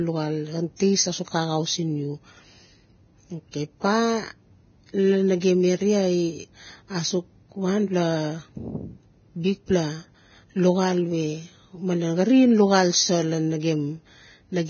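Speech with heavy codec damage throughout, likely from Vorbis compression. Nothing is left above 6.6 kHz. The treble that remains sounds hissy and grainy, and attacks blur. The damage fits a low bitrate of around 17 kbps. Pre-echo appears twice. Between 0.76 and 0.80 s, a hiss of about 38 ms runs ahead of a sharp onset. At 5.40 s, a shorter one of about 19 ms does the same. In both places, the coding noise spreads back into the quiet before the attack, so the onset sounds smeared.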